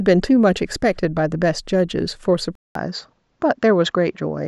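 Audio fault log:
2.55 s to the end: input switched to a poorer device. A gap of about 200 ms of silence opens at 2.55 s. After it the speech sounds duller, with nothing above 7.5 kHz. A faint new background noise sits far below the speech. Loudness stays about the same. The cause is likely a change of input to a different, narrower-band microphone, which brings its own limited bandwidth and noise floor.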